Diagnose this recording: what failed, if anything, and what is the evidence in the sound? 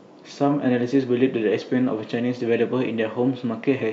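Nothing failed; no fault is audible at any stage.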